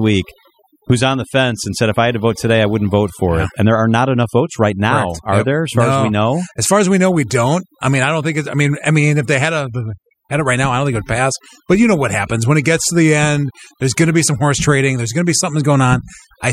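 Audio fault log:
Throughout: overdone noise removal. A noise reduction stage was set too hard on a noisy speech recording. Any frequency band sitting near its noise estimate gets pushed down or shut off, and the quieter parts of the speech fall into that range too. The background drops, broken by small twinkling specks where bands flick on and off. The speech comes out missing its softer detail.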